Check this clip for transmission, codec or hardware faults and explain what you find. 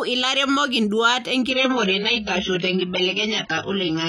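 One fault: from 1.50 s to the end, an adaptive stream at a lower bitrate. The connection slowed, so the player switched to a much cheaper encoding, consistent with a drop from around 96 to 12 kbit/s. Speech abruptly dulls, with nothing above 6.5 kHz and a smeared, watery texture. A spectrogram shows a sudden flat ceiling, with no waveform gap.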